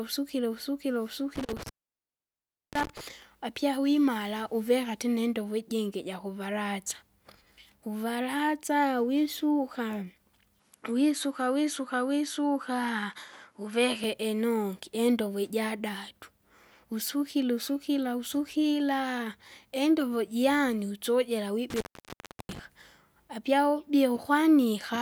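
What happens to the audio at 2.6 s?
At 2.6 s the speech has cut out, leaving faint hiss with crackle at the edges, before resuming at "apya wimara uveka tena". This intermittent contact runs from 1.36 to 3.01 s: a loose cable or plug opens the line for about 1.04 s.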